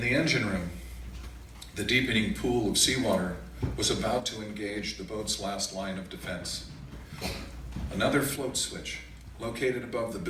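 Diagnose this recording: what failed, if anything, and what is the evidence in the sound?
A digital gain stage in the processing chain most likely changed its setting from one sample to the next with no ramp, producing a sudden gain jump. At 4.2 s the whole signal, background noise included, drops by about 6 dB at once, then snaps back up at 6.92 s. At 8.36 s it drops again, by about 5 dB, and stays down to the end. Because sound and noise floor move together instantly, the fault lies in digital scaling, not in the source.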